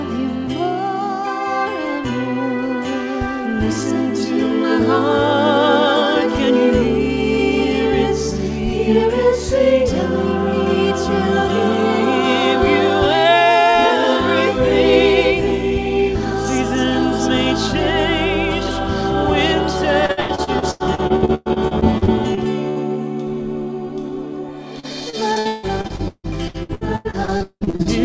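Repeated packet loss (robotic sound) hits from 20.06 to 22.79 s and again from 24.80 to 27.88 s. In each stretch, audio packets go missing in quick succession, and every hole is patched by extending the last sound. That patching produces the choppy texture. About a third of the first stretch is filled this way (gaps up to 111 ms), and nearly 40% of the second (up to 179 ms). The audio comes through a call path with nothing above 8 kHz, which fits a G.722 wideband codec.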